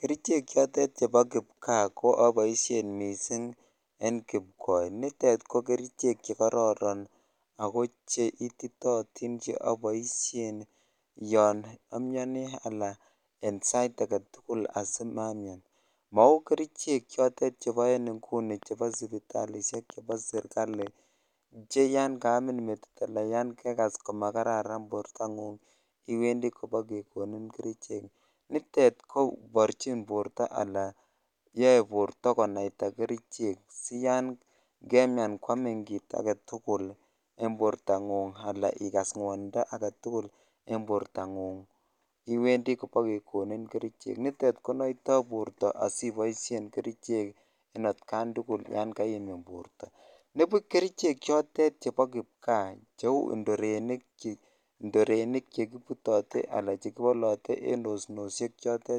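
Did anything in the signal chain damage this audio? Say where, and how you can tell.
Yes. From 18.63 to 20.88 s a train of clicks rides over the speech: around ten sharp, similar-shaped pops at about 3.6 per second, spaced unevenly, peaking about 5 dB above the programme and audible in the gaps as well. That they sit on top of the signal rather than replacing it points to something injecting pulses, most likely electrical interference in the analogue wiring or a faulty connection or power supply, not the codec or network.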